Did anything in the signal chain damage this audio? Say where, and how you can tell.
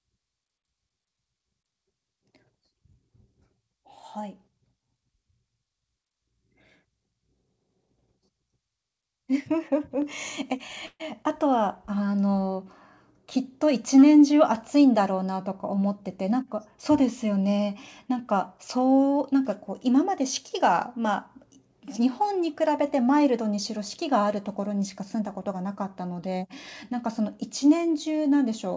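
Yes. At 10.02 s the call processing stepped the microphone volume up by about 4 dB in one jump. Voice and background noise rise together at that instant, which points to the device's input gain being raised rather than the talker getting louder.

From 10.86 to 11.02 s there is a call audio freeze: the last sound is stretched into a fading buzz for about 138 ms, ending in roughly 30 ms of silence. Playback then resumes where it stopped with nothing lost, so the jitter buffer likely ran dry while packets were delayed on the network.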